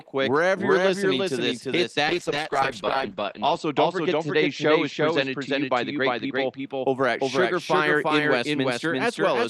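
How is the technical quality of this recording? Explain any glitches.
The recording has two clear faults: a full-strength double of the speech throughout, and a stretch of coarse, muffled coding in the middle.

A doubled audio track runs throughout: an equally loud copy trails roughly 0.4 s behind, likely from a second, slower capture path. Unlike reverb, it is clean and undecayed.

A call bitrate drop runs from 2.07 to 6.73 s, after "listening to this hit" until "over at". The encoder fell from 40 to 9 kbps, narrowing the band from 20 kHz to 8 kHz. For 1.59 s at the lowest rate the sound turns rough and dull, unlike steady filtering.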